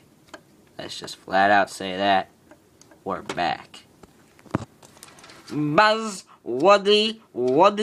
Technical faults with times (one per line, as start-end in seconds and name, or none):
none